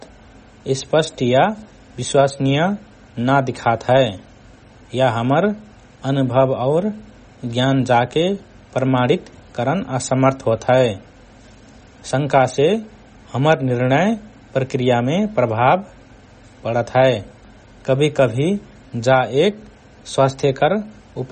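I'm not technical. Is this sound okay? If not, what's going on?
No. All the way through, the speech has plainly audible MP3 compression damage, likely from squeezing the file too small. Nothing above about 8.3 kHz survives, and unlike simple muffling, what remains sounds watery and swirly, with chirpy, metallic s sounds.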